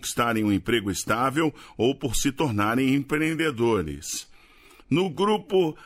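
Up to 2.86 s the pace sounds natural, but from there to the end of the clip there's a time-stretched section: everything drags at roughly 0.74 times its original speed, yet the pitch doesn't drop at all. The slowed part drags, the way it does when short chunks get repeated to pad out time. That's likely software stretching that stretch of audio to fit a longer slot while holding pitch steady.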